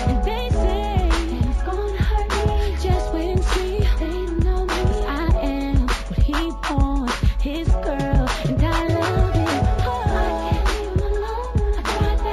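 Throughout the clip there is imaging from linear upsampling. The sample rate was raised by joining samples with straight lines, a weak interpolation filter. The sound points to a conversion from 16 kHz to 48 kHz. The top of the original band, near 8 kHz, is dulled. A faint mirror image of the spectrum sits between 8 kHz and 16 kHz, roughly 35 dB down. It adds a light metallic shimmer to bright, sharp sounds.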